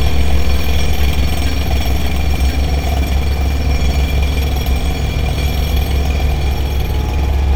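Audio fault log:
Throughout, doubled audio track: every sound returns about a second later as a clean, dry copy roughly 5 dB quieter, likely from a second, slower capture path.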